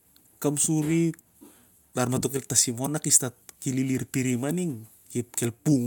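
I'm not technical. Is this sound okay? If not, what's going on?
Yes, this speech recording is fine. There are no technical problems to hear anywhere in it.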